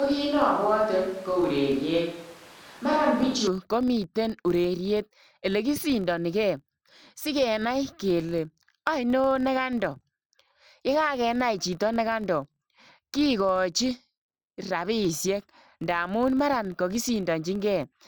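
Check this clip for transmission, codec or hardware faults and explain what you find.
Two faults are present in this speech clip.

Filter restarted on every block, throughout: a filter discards its memory at each block boundary and starts again from silence, leaving a small transient every time. These form a buzz at about 43.1 Hz, which fits 1024-sample blocks, rising and falling with the speech level.

Switch to a distant microphone, from the start to 3.47 s: already under way when the clip begins, the speech sounds roomy, hollow and thin in the bass, with background noise roughly 25 dB below it. The level stays about the same. The sound changes abruptly back to close and full just before "komiteen ureriet ele kosindanikei". The likely cause is a failed or omitted close microphone, with a farther one used instead.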